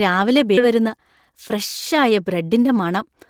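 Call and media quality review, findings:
Abrupt jump at 0.57 s, about 0.7 s of speech missing, joined with no gap. Skip ahead: jitter buffer discarded queued audio, likely on overflow.

Hurried delivery at unchanged pitch from 0.67 to 3.03 s, running about 110% speed. Jitter buffer speed-up: repeated pitch-period cuts removing roughly 0.2 s of excess buffered delay.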